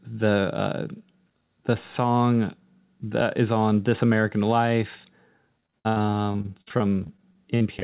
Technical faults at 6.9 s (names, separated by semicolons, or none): repeated packet loss (robotic sound)